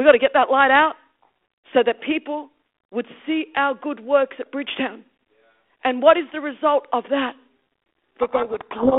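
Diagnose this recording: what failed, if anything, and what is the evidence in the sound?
A codec payload misread starts at 8.2 s and runs to the end of the clip. The speech is suddenly buried in harsh, gritty distortion. The stage is the codec. The line itself is narrowband G.726 ADPCM, passing roughly 250 Hz to 3.5 kHz with light coding hiss, which fits the 32 kbit/s DECT rate. At 8.2 s the decoder starts unpacking each code word with its bits in reversed order. Every decoded difference is wrong, so the adaptive predictor drifts and the distortion never clears.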